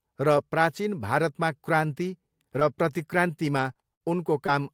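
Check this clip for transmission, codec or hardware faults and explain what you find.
One transmission fault is present: scattered short gaps in the speech between 2.59 and 4.50 s. About five packets went missing or arrived late, totalling 140 ms, with the longest hole around 50 ms. The receiver concealed 80 ms of that by extending the preceding sound, which produces brief ticks, smears and hiccups. These isolated blemishes, spread across the stretch, set it apart from a single burst dropout, which would leave one longer hole or stutter.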